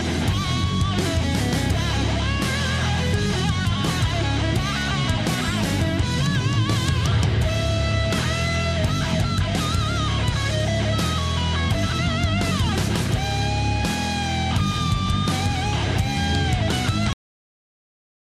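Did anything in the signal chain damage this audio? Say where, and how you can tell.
Yes: a cut-off end at the storage stage, where the final buffers were never written, so the sound stops abruptly at 17.13 s and drops to digital silence with no decay.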